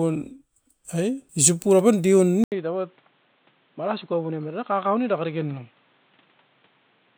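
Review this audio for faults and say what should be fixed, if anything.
The recording input was likely switched to a poorer device partway through, at 2.44 s, after an 80 ms silence at the switch. From there to the end, the speech is band-limited with nothing above 4.2 kHz, so it turns dull and boxy. It also drops to roughly 10 dB quieter and carries a new noise floor around 35 dB below the speech. To prevent this, lock the capture device for the session and disable automatic switching to headset call profiles.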